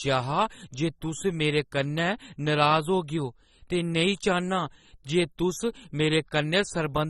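From start to finish the speech sounds dull and plainly processed, with nothing above 12.8 kHz. On a spectrogram this shows as a flat ceiling at that frequency. The damage is likely from AAC compression at a low bitrate, which fits about 24 kbps.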